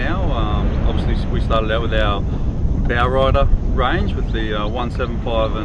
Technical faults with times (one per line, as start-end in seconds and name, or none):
none